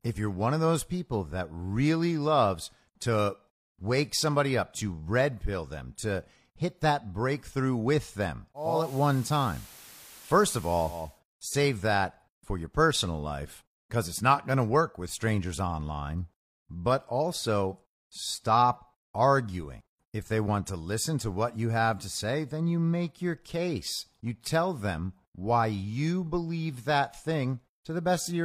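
At 8.54 s the speech goes through a digital radio blending to analogue: the receiver loses its digital stream and cross-fades over about 380 ms to the station's FM signal, bringing up hiss around 25 dB down and a level shift of about 2 dB, before returning at 11.21 s.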